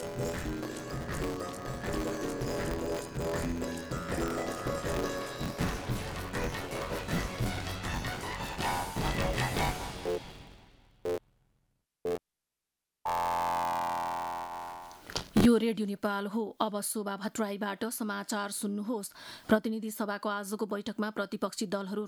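From the start to about 15.46 s there's buffer tearing: writer and reader have slipped, so roughly a third of each buffer replays audio from about 20 ms earlier, hard-spliced both sides. That gives a robotic 86.1 Hz rattle, which fits a 512-sample buffer.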